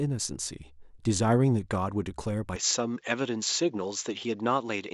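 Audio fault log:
2.56–4.93 s, input switched to a poorer device. Sound dulls, losing everything above 7.6 kHz, with faint new background noise. Likely a narrower-band microphone took over.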